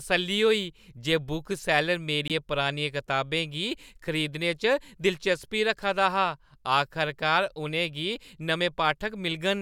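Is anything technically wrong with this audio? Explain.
Yes. From 2.28 to 2.31 s the speech briefly cuts out, with about 20 ms of silence. This is likely a Bluetooth stall: held-up packets let the headphones' buffer run dry. It sounds like a clean gap rather than a click or repeated fragment.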